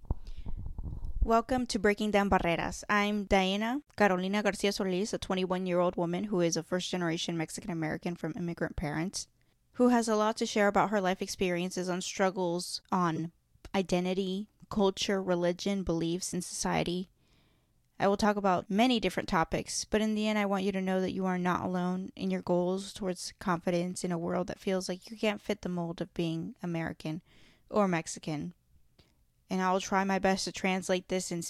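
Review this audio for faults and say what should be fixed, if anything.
A corrupt frame decoded appears at 13.16 to 13.19 s, between "life experiences on struggles" and "identity culture religion beliefs". It lasts about 38 ms, roughly one frame. Flipped bits in that compressed frame went unnoticed, and the decoder rebuilt it anyway. Misread gains and codes put energy at the wrong frequencies. The result is a brief burst peaking around -20 dBFS. Prevent it by checking frame integrity and concealing damaged frames instead of decoding them.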